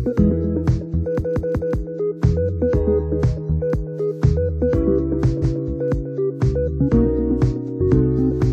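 At 1.19 s a 186 ms block of sound plays three extra times, to 1.74 s, then at 5.41 s another plays once more, to 5.60 s. These are repeated frames: duplicated compressed data, likely four frames per block, heard as stutters.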